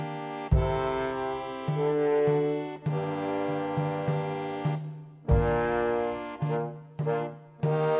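Nothing goes wrong anywhere in this one, so there's no fault to point to at any moment.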